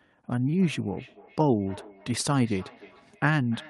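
From 0.41 s to the end, the speech carries feedback echo between two devices. A second device in the room replays the call, and this microphone picks it up again. Each word returns roughly every 0.3 s, thinner and ringing, peaking at about -23 dB.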